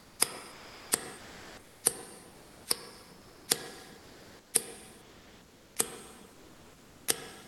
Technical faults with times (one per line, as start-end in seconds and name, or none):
0.51-0.91 comfort noise in place of the background
1.17-1.83 comfort noise in place of the background
2.31-2.65 comfort noise in place of the background
3.17-3.47 comfort noise in place of the background
3.99-4.53 comfort noise in place of the background
5.01-5.75 comfort noise in place of the background
6.33-7.07 comfort noise in place of the background